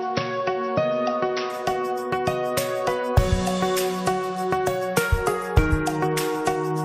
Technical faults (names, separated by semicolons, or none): input switched to a poorer device